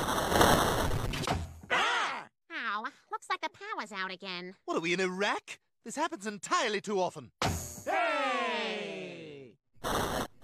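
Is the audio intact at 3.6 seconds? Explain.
Yes, the audio is intact at 3.6 seconds, with no dropout, glitch or other fault audible at that point.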